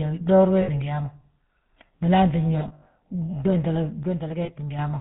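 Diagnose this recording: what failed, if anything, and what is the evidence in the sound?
The codec stage is at fault across the whole speech clip. The GSM full-rate codec leaves a plainly audible buzzy, gravelly roughness, consistent with the 13 kbit/s GSM coder. It rebuilds the voice from a vocal-tract filter driven by a thinned, regularly spaced pulse excitation, which produces the grainy texture. On a spectrogram, energy stops hard at 4 kHz, and the harmonics below look smeared and coarse.

Lost GSM frames are a network or transmission fault heard at three points. From 0.62 to 0.70 s, about 60 ms of sound turns into a held, metallic ring, which fits a short burst of missing frames. From 2.58 to 2.87 s, about 160 ms is lost in scattered gaps, the longest around 70 ms. From 4.44 to 4.51 s, about 40 ms rings the same way. The decoder repeats the last good frame's parameters at falling level, so the spectrogram shows frozen, stripe-like bands and the waveform shows a decaying envelope.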